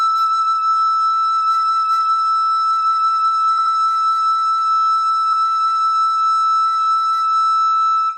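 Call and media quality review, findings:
Repeated frames: encoder or transport wrote compressed frames more than once; decoder replays each block, causing music stutter. At 0.86–0.88 s (21.3 ms, one extra play), 3.57–3.74 s (85.3 ms, two), 5.32–5.43 s (106.7 ms, one), 6.81–6.86 s (21.3 ms, two). 21.3 ms steps fit single-frame units.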